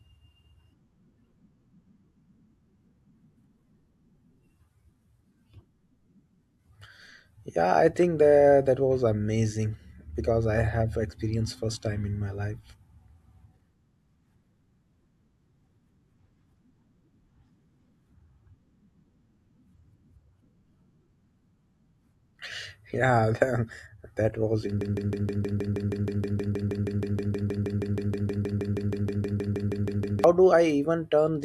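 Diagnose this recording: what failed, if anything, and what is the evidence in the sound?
A broken-record loop runs from 24.81 s to 30.24 s: a 158 ms fragment of the speech repeats exactly, back to back, 34 times. The stage is likely playback or stream buffering that stalled and kept re-sending its last buffer, so the speech due in that span is lost.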